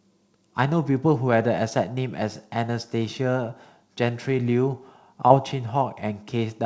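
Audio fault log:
5.28–5.32 s, short concealed packet loss: about 20 ms of the call arrived too late for the decoder, so the receiver bridged the gap by extending the preceding sound for roughly 21 ms and then crossfading back into the real signal, heard as a brief smear or wobble. On a spectrogram the harmonics or noise stretch flat and unchanging for that instant, below the 8 kHz ceiling of the G.722 call path. The waveform shows repeated cycles there if the sound was voiced, then a blended join.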